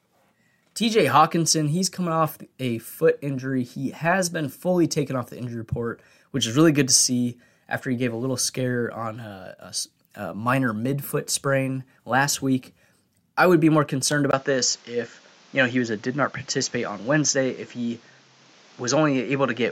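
Speech that, at 14.31 s, drops out for about 20 ms and comes back duller and boxier through to the end, with nothing above 7.6 kHz and a new background hiss roughly 30 dB below the voice, at much the same level. The likely cause is an input switched to a poorer device partway through recording.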